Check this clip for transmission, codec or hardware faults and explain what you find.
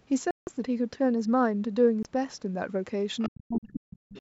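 The clip has three kinds of fault: two dropouts, leakage of the far end's voice, and suppression of the near talker.

Bluetooth stall, likely: at 0.31–0.47 s and 2.03–2.05 s the speech drops to silence, most likely because the headphone buffer ran dry. The waveform shows flat gaps of 162 ms and 20 ms.

Other side's voice leaking through, likely: at 3.19–3.29 s, and again from 4.14 s to the end, a faint second voice survives echo cancellation at about 15 dB and then about 25 dB below the speech. It shows as weak harmonic traces.

Speech suppressed in double talk, likely: from 3.28 to 4.14 s the canceller turns the talker down during overlap. The drop is deep, around 40 dB, over roughly 0.7 s in total, and the spectrogram shows faded speech energy. Under all of this, the call's band limit is visible as empty spectrum above 8 kHz.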